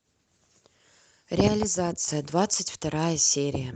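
From 1.48 to 2.08 s, speech and noise drop together by about 6 dB: a sudden gain jump, likely an unramped gain change.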